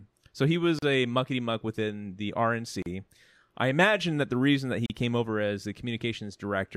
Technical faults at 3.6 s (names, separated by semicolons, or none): none